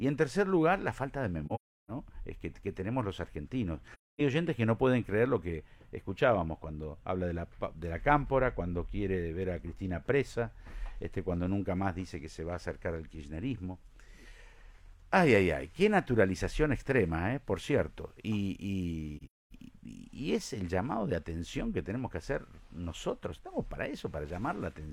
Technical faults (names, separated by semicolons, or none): AAC frame loss with muting